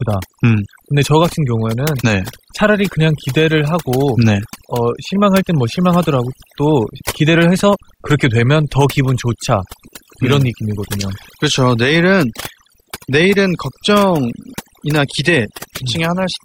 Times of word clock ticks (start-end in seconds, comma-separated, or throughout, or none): none